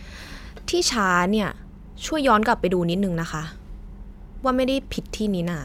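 No technical faults can be heard in the recorded speech. There is nothing in it that needs a timestamp or a closer listen.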